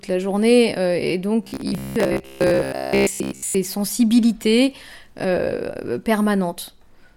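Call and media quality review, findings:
Robotic sound from repeated short buffers, 1.43–3.55 s. Likely cause: audio arriving too seldom, playback looping the last buffer, about 15 ms, to fill gaps. Most real audio in that span skipped. Speech becomes a rigid 66.8 Hz metallic buzz, words only roughly followed.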